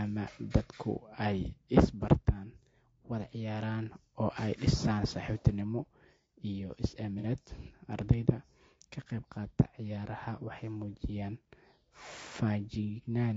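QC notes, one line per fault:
throughout: low-delay AAC compression. Rough, grainy speech with noise between harmonics and a thin top band; likely AAC-ELD short frames at around 32 kbps.
7.19–7.24 s: AAC frame loss with concealment. A brief smeared, noisy patch where the decoder rebuilt about 30 ms from the previous spectrum, consistent with one lost frame.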